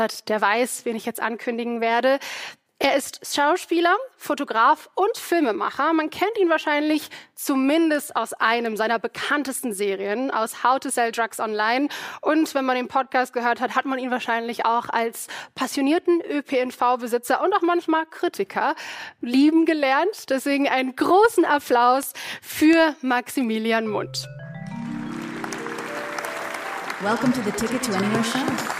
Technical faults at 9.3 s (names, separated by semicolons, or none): word clock ticks